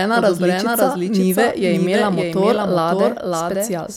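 Throughout, a doubled audio track: a copy about 5 dB quieter trails by roughly half a second, likely from a second capture path, repeating the same onsets in waveform and spectrogram.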